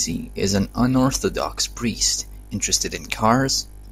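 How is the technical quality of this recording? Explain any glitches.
Listening through the recording, nothing stood out as a technical problem, and there are no glitches to explain.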